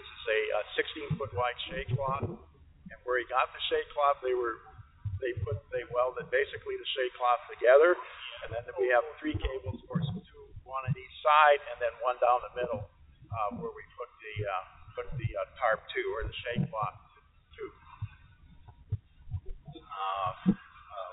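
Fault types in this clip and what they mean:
No faults can be heard anywhere in this clip. It has come through a WebRTC call path using G.711 A-law at 64 kbps, which leaves nothing above 4 kHz and gives it the narrow, telephone-band sound of that codec.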